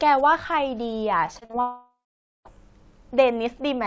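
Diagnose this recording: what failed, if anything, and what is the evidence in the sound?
Repeated packet loss (robotic sound) from 1.26 to 1.55 s, a network fault: four short gaps, the longest 40 ms, each patched by extending the preceding sound. About a third of that span is synthetic fill, so the speech turns choppy, with small pieces missing.

Long network dropout from 1.61 to 2.47 s: roughly 840 ms of speech never plays. The receiver stretches the last sound into a fading buzz, then leaves about half a second of near silence, a pattern most likely caused by a stalled stream on the network.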